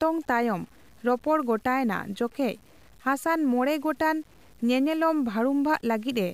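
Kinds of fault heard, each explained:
Low bit depth without dither: A grainy, rough distortion runs through the whole speech clip and changes with the sound. It is worst on quiet passages and word endings, which turn gritty or sputter out instead of fading smoothly. The cause is likely coarse quantisation, rounded down without dither, so the error tracks the signal. The grit sits roughly 35 dB below the speech, which fits an 8-bit signal.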